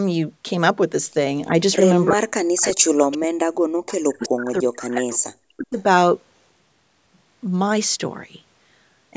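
A speech recording, band-limited to 8 kHz by call microphone processing, shows speech suppressed in double talk from 2.09 to 3.51 s and from 4.01 to 5.79 s. Within each stretch about 1.5 s of the talker dips or cuts out, by as much as roughly 40 dB. This is likely an echo canceller ducking its own talker while the far end also speaks. Echo leak appears as brief delayed copies at 2.61–2.75, 3.12–3.17, 3.91–3.96 and 5.11–5.19 s, lagging the original by 382 to 395 ms and sitting roughly 15 to 25 dB below the speech. These are likely residual loudspeaker pickup that the canceller failed to remove.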